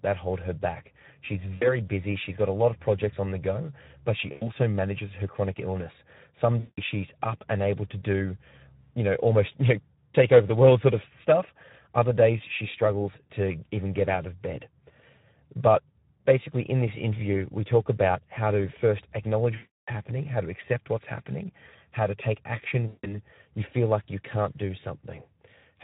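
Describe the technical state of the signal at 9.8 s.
At 9.8 s the speech carries Speex codec damage, present throughout the clip rather than at this moment alone. The CELP coder has too few bits for the excitation, so the speech sounds hoarse and noisy, which fits a bitrate near 11 kbps.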